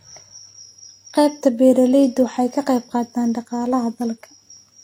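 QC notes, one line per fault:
Throughout: transcoding between lossy codecs. The speech was likely encoded as Vorbis, then re-encoded as HE-AAC, with artefacts fitting roughly 45 and 32 kbit/s. The second encoder wastes bits on the first one's damage, so both sets of artefacts sound layered, and nothing remains above 16.2 kHz.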